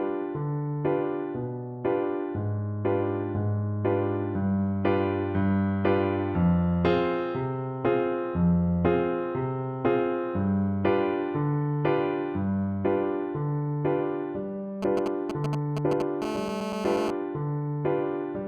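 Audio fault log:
14.83–16.02 s, GSM signalling bursts: a nearby 2G phone's short radio bursts get rectified, giving galloping ticks and brief 217 Hz buzzes, nearly as loud as the sound itself.
16.22–17.11 s, GSM phone buzz: the phone goes into a call and bursts steadily 217 times a second, so you get a hard, raspy buzz about 6 dB below the signal.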